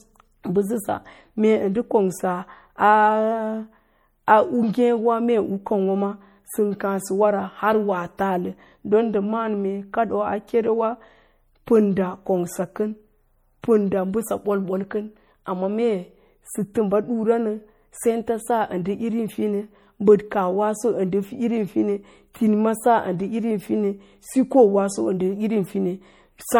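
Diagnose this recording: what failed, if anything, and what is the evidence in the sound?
MP3 compression runs throughout this speech and is plainly audible: a watery, swirling texture, with nothing above 21 kHz. At the codec stage, weak frequency lines switch on and off between frames, most likely from MP3 encoding at a low bitrate, which fits around 48 kbps.

Pre-echo appears at 16.74 s and 22.33 s, a brief hiss of about 12 ms and 16 ms ahead of sharp attacks, which sound softened. The codec spreads quantisation noise across a whole block, so noise sized for the loud attack leaks into the quiet moment before it.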